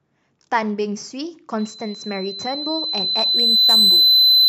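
From 1.58 s to the end of the clip, loudspeaker feedback squeal rises over the speech. A steady 4 kHz tone swells over roughly two seconds to about 15 dB above the voice. The loop keeps feeding that one frequency, which sets it apart from broadband hiss or a brief electrical whine.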